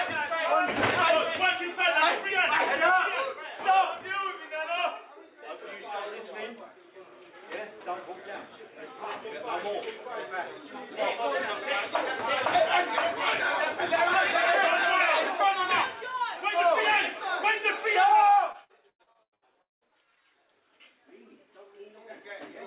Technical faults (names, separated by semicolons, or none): repeated packet loss (robotic sound)